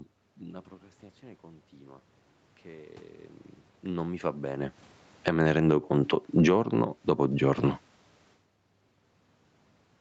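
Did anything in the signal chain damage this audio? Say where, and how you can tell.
Yes. Automatic gain falling in call processing: at 5.12–5.46 s and 6.23–7.05 s, speech and noise floor sink together in the waveform, by about 13 dB, then 6 dB.

Automatic gain rising, same stage: from 5.37 to 7.8 s the gain climbs about 9 dB. Speech and background swell together, brightening the spectrogram's noise floor.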